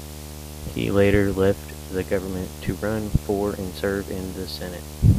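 Right from the start and running the whole way through, there's video or display buzz under the speech. Something on the screen side, a monitor or its video cable, is coupling into the audio path, so you get a steady buzz locked to the picture's 75 Hz field rate, with a gritty hash riding on top. It's not subtle either: it sits only around 15 dB below the speech, so it's clearly audible even when someone's talking.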